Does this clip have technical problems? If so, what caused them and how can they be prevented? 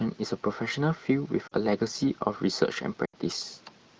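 Yes. At 1.48–1.53 s and 3.06–3.15 s the speech briefly smears and dips, the second lasting longer. These are lost AMR speech frames: radio errors corrupted about 40 ms and then 80 ms of the AMR-WB stream, so the decoder repeated its last good settings with falling gain. Stronger radio coverage or more robust channel coding prevents this.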